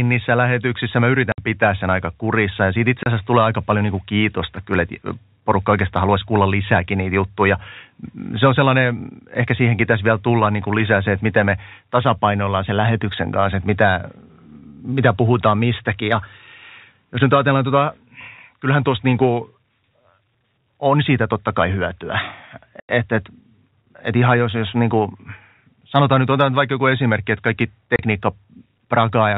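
Packet loss filled with silence hits at 1.32 s (60 ms), 3.03 s (30 ms), 22.8 s (90 ms) and 27.96 s (30 ms). Missing chunks were swapped for dead air, so the speech drops out with hard edges, in gaps that fit 30 ms packets.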